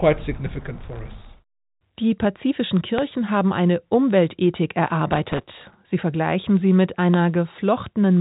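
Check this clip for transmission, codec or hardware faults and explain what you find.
Two kinds of fault are present, a processor overload crackle and a loud pop, each occurring twice, heard over a telephone-band signal that stops near 3.8 kHz, consistent with G.711 A-law coding.

Processor overload crackle, 0.77 to 1.34 s and 5.11 to 5.75 s: the processor is falling behind on very short audio buffers, well under a millisecond each, and misses deadline after deadline. Each miss replays a scrap of stale audio with hard edges, so the speech acquires a gritty, tearing crackle. The first burst suggests a few dozen misses. The second is denser, closer to a hundred, and both stop once the load eases.

Loud pop, 2.98 s and 7.14 s: each is a single sharp pop about 20 ms long, peaking roughly 15 dB above the speech, which carries on underneath without a break. The likely cause is a sudden voltage step or spike entering the chain, such as from a switch, static discharge or a driver glitch. 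Downstream circuitry shapes that pulse into a brief, hard transient.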